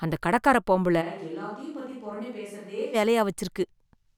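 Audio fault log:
1.03–2.93 s switch to a distant microphone: speech abruptly turns hollow, roomy and bass-light, about 10 dB quieter with more room noise, likely because the close mic's signal was lost.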